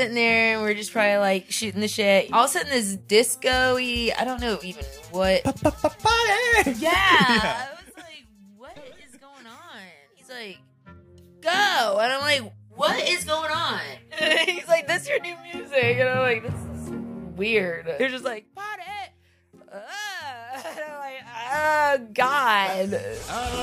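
Zipper noise ticks through four level moves: down at 7.34–7.90 s, up at 10.12–11.24 s, down at 18.02–18.48 s, up at 21.18–21.73 s. Each fade jumps in unsmoothed steps of 2 to 4 dB, about ten per second, and each step clicks.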